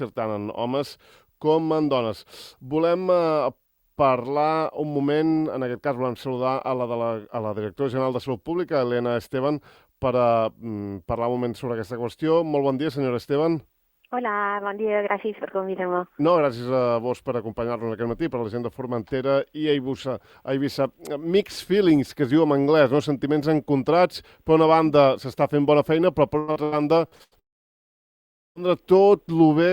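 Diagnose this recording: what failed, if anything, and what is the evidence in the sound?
Near the end, from 26.39 to 27.34 s, the sound turns choppy. That's repeated packet loss (robotic sound) on the network leg. Six holes land close together, the longest about 84 ms, and the receiver patches each by stretching the last bit of audio it had. That patching covers roughly 360 ms, about 38% of the stretch, so you get that chopped texture with pieces missing.

Right after, from 27.39 to 28.58 s, the audio stops for over a second. There's a quick smeared tail and then basically silence for most of it before the sound returns with that chunk gone. That's most likely a long network dropout: the stream stopped arriving, concealment held on briefly and faded out, and the roughly 1.2 s that went missing was never played.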